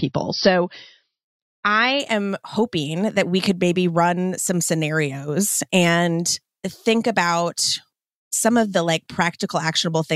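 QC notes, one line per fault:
0.0 to 2.0 s, adaptive stream starting at a low bitrate: the speech opens dull and band-limited, with nothing above 6 kHz and more pronounced codec artefacts. At 2.0 s the treble returns and the artefacts drop away abruptly, with no gap in the audio. This sounds like the player beginning on a cheap rendition, consistent with MP3 at around 32 kbit/s, then switching to a higher tier near 128 kbit/s once throughput was measured.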